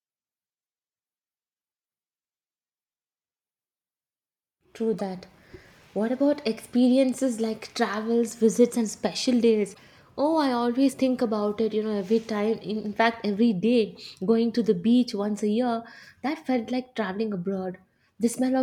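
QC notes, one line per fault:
4.99–5.01 s, damaged data in a compressed stream: brief glitch where corrupted frames are misread and the decoder loses sync, hunting for the next frame header.
9.71–9.79 s, damaged data in a compressed stream: longer glitch of about 80 ms as bad bytes garble decoding until the decoder resynchronises on a valid frame.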